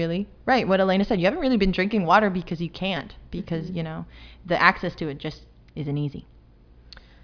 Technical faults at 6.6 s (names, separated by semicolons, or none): none